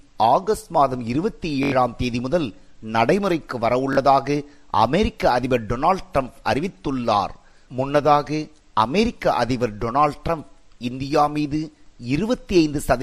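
Bluetooth stutter at 1.63 s (85 ms lost) and 3.93 s (43 ms): dropped packets replay one short slice as a buzz, shown as repeating stripes, then a jump ahead.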